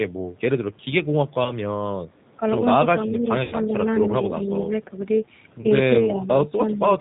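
Throughout, the speech has the slightly rough, synthetic grain of the G.729 codec. Its narrowband design leaves a spectrogram empty above 4 kHz, consistent with an 8 kbit/s coder.

At 1.44–1.52 s, 3.44–3.56 s and 5.61–5.66 s, VoIP packet loss concealed by the speech codec stretches the last sound into a fading buzzy tone or coloured noise. The waveform shows smooth decaying repetition, and the spectrogram shows flat smeared harmonics, longest at 3.44 s.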